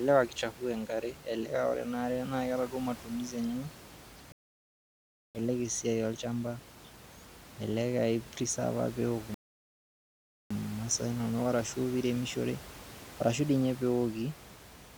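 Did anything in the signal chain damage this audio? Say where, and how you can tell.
Yes. Two rebuffering stalls occur at the playback stage. The speech cuts to silence at 4.32 s and resumes at 5.35 s, then again from 9.34 s to 10.51 s. Each picks up exactly where it stopped. The player's buffer ran dry, adding about 1.0 s and 1.2 s.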